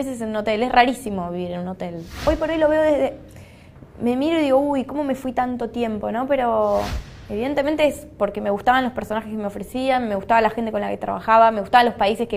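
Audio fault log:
No fault is audible anywhere in the clip.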